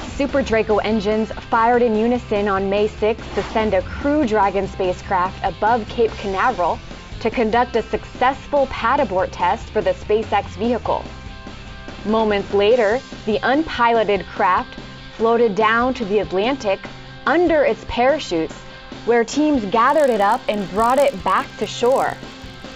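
The audio runs cleanly until about 19.88 s, then picks up a low, rough buzz that stays to the end. That's the signature of a resampler restarted on every block. Each 20 ms chunk got converted on its own, so the filter had no real neighbours at the edges and left a small glitch at every boundary. Fifty of those a second fuse into a 50 Hz buzz that rides along only while there's signal. The upsampling looks like a 16 kHz to 48 kHz conversion.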